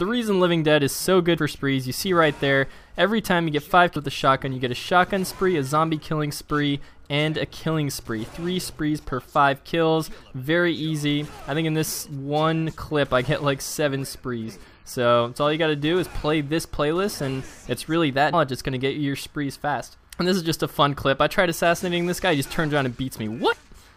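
Brief glitches break the audio at 1.37, 3.95 and 18.32 s and from 23.52 to 23.54 s, from damaged data in a compressed stream throwing the decoder off sync.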